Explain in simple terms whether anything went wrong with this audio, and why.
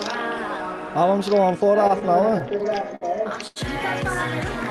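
Between 1.87 and 3.03 s, packets kept arriving late, so the receiver's waiting buffer ran dry ten times. This is repeated stalls (stutter): each time the last sound is stretched to cover the wait, the longest about 58 ms. Nothing is lost, but the audio drags and stumbles.

At 3.47 to 3.58 s, one packet turned up late, causing a short stall from a late packet. The receiver held the previous sound for about 86 ms until it arrived, then carried on, so that moment lingers too long with a faint buzz or dip.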